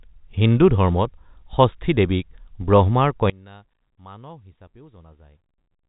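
From 3.3 s, one channel was likely inverted in polarity. Summed to mono, the speech cancels, dropping about 25 dB to a faint trace.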